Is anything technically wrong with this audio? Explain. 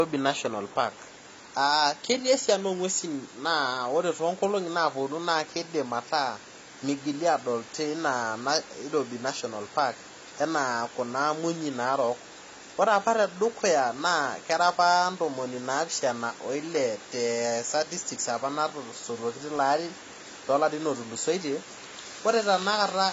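Yes. Throughout the speech, the top end stops dead at 7.5 kHz, and the sound is dull and smeared with a warbling, fizzy texture on sibilants. That is likely AAC compression, fitting AAC-LC at about 24 kbps. Starved of bits, the encoder lowers its cut-off and leaves spectral holes. A spectrogram shows a flat ceiling and patchy, blocky gaps beneath it.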